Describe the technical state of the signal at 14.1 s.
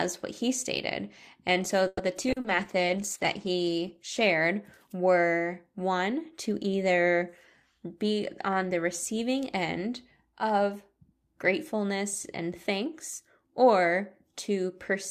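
At 14.1 s the speech signal is intact, with no fault to be heard at that moment.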